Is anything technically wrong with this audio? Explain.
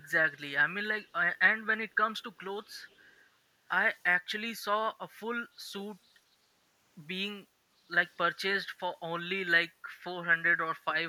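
Yes. From 2.91 to 2.96 s there is a brief echo leak, a very faint copy of the speech arriving about 0.4 s late and roughly 40 dB down. It likely comes from a far-end loudspeaker whose echo canceller let a scrap through. A spectrogram shows a faint repeat of earlier speech patterns, and the waveform barely changes.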